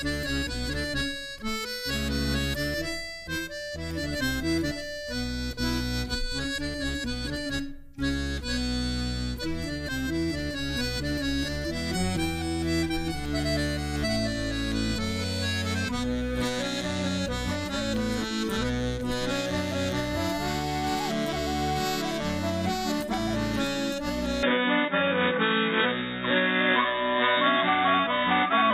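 Input switched to a poorer device, likely, at 24.43 s: the sound turns dull and boxy, cut above 3.8 kHz, with a level shift and faint new noise.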